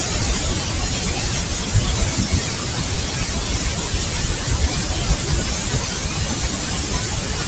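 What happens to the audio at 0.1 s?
At 0.1 s the clip is already under the noise suppressor applied to music or sounds, a fault that runs through the whole recording. The suppressor, built for speech, treats steady tones, ambience and reverb as noise and turns them down by around 5 dB, so onsets pass while sustained parts and tails sink, and the sound pumps, flutters or thins out. On a waveform, the envelope dips after each attack. On a spectrogram, decays fade early, all below the 8 kHz limit of the call path.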